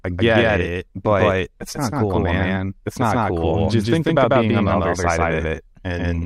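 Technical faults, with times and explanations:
Throughout, doubled audio track. Every sound in this speech is heard twice. A second full-band copy trails the original by roughly 150 ms. It is about as loud as the first. The repeat is dry, with no decay or room colour, so it does not sound like an echo from walls. Syllables smear into a stuttering, slapback double. The likely cause is the same signal being captured a second time through a slower path and mixed back in.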